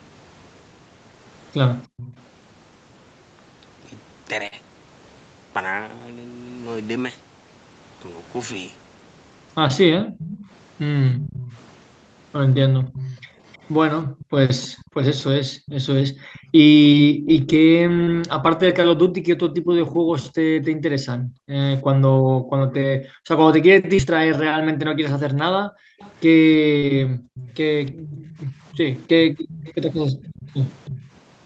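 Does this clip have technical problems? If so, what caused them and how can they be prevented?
Yes. From 1.87 to 2.17 s and from 9.91 to 31.12 s, the speech dips by up to about 40 dB or cuts out in pieces. This is speech suppressed in double talk, likely from an echo canceller muting everything while both sides spoke. Better echo cancellation with proper double-talk detection, or a headset at the far end, prevents this.

A faint delayed copy of the voice, about 313 ms late and about 15 to 20 dB down, appears at 1.97 to 2.22, 10.18 to 16.51, 19.53 to 19.94 and 25.99 to 31.10 s. This is echo leak, likely loudspeaker sound passing the far end's echo canceller. Lower speaker volume, headphones or a better-tuned canceller stops it.

Brief smears occur at 4.47, 18.04, 23.95 and 26.78 s. This is short concealed packet loss: about 40 ms of audio went missing, and the receiver filled each gap by extending the preceding sound. 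A steadier network connection or forward error correction prevents these gaps.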